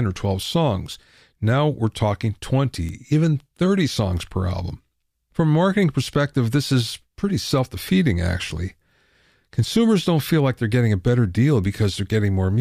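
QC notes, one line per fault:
2.89 s and 11.64 s, bit error spike: a single hard tick after "we're talking" (peaking at about -16 dBFS) and again after "getting a better deal" (about -22 dBFS). Each is one corrupted sample, where a flipped bit jumps the value and snaps back, spraying broadband energy unrelated to the speech.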